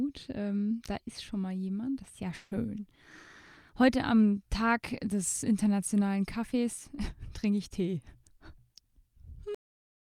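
At 2.35 s the sound breaks up until 2.53 s. For about 160 ms the last sound is stretched into a buzzy, fading hiss, and it never falls to silence. When the audio resumes it picks up further along, with that stretch simply gone. This is most likely a long network dropout concealed by the receiver. Unlike a brief packet loss, the smeared fill covers a long stretch, and nothing of the missing part is recovered.

At 9.55 s the audio has a cut-off end. It stops in the middle of a sound and drops straight to digital silence with no decay, and that silence runs to the end of the file. The final buffers were never written or played out. What separates it from the earlier dropout is that there is no concealment buzz, and the sound never comes back.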